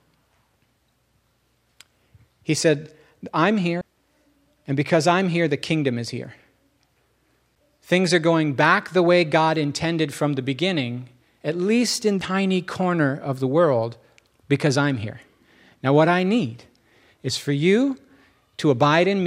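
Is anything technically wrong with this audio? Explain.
Yes. The speech is broken by three CD skips, at 3.81 s, 7.55 s and 12.21 s. Each is a brief tick, with a dropout of roughly 10 ms, then 7 ms, then only a couple of milliseconds, after which the speech resumes from a different point in the recording. A knock or a disc flaw threw the laser onto another turn of the spiral, so the player muted briefly and carried on from the wrong place.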